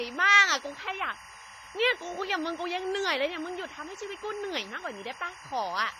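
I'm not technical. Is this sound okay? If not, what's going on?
No, two problems run through the whole speech clip, from start to finish.

Timecode bleed, present throughout: behind the speech sits a steady chirping warble, fairly quiet. It comes from a timing signal used to keep video and audio in sync, which leaked in from a nearby cable or track. That signal flips between two pitches, around 1 kHz and 2 kHz, and its pattern repeats at film speed, 23.976 frames per second, giving that constant chattering texture.

WMA compression, also throughout: the speech sounds smeared and washy, with a ringing edge and a hiss that swells and fades along with the talking. Nothing at all is present above about 15.5 kHz, so the top sparkle is gone. This is likely the result of saving the file as heavily squeezed Windows Media Audio. To save space, that format spreads small errors across each sound and throws away quiet detail, which is what causes the blurring and hiss.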